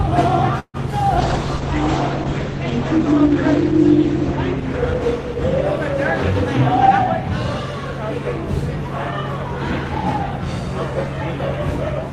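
At 0.59 to 0.77 s comes a call audio freeze: the last sound is stretched into a fading buzz, going silent for about 50 ms. A jitter buffer running dry is the likely cause. Unlike a dropout, nothing is skipped; playback resumes where it paused, now 145 ms later.

From 1.19 to 6.87 s a call bitrate drop takes the encoder from 32 to 10 kbps, bottoming out for about 2.4 s. The audio turns rough and watery, and the top end shrinks from 20 kHz to 8 kHz. A simple low-pass filter would not add that coding grain, and this recovers as the bitrate climbs back.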